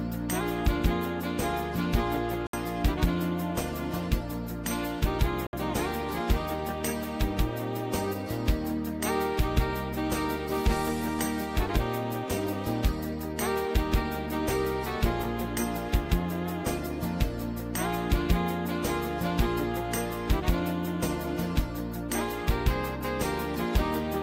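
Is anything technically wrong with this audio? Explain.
Yes. At 2.47 to 2.54 s and 5.47 to 5.53 s the sound cuts to silence for about 64 ms, then resumes further along rather than where it stopped, which sets it apart from a pause or buffer stall. This is likely a Bluetooth dropout, with roughly three packets arriving too late for the headphones.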